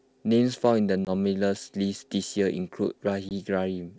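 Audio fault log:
1.05–1.10 s and 3.29–3.32 s, packet loss on an ADPCM call: each time about 20 ms, likely a couple of packets, drops to hard-edged silence. Unlike a clean dropout, the speech comes back slightly distorted while the decoder's predictor and step size resynchronise over the next few tens of milliseconds.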